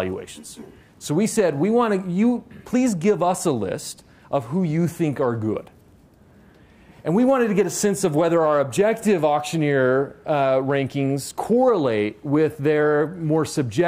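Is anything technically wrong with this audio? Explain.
No, nothing technically wrong turns up anywhere in this audio.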